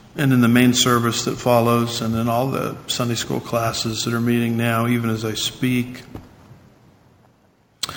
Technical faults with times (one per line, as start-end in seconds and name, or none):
0.00-7.97 imaging from sample-and-hold upsampling